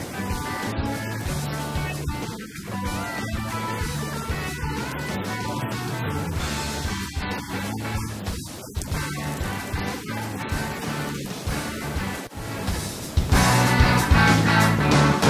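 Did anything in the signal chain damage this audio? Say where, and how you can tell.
No, nothing in the signal chain audibly damaged this audio.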